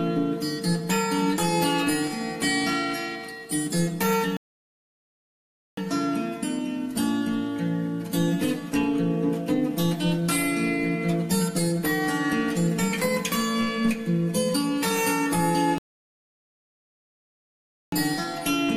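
At 4.37 s the audio drops into silence for about 1.4 s, then carries on from the exact point it stopped. That's a rebuffering stall: the player ran dry and waited for more data. It happens again at 15.78 s, this time for about 2.1 s.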